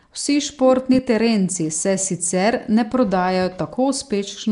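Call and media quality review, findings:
Speech, throughout: rough hissy halo, smeared underwater tone, nothing above 10.6 kHz. Likely Nellymoser compression, Flash's Asao mic codec, consistent with about 44 kbps. Fixed two bits per sample in short blocks. Starved bands replaced by noise fill, hence hiss.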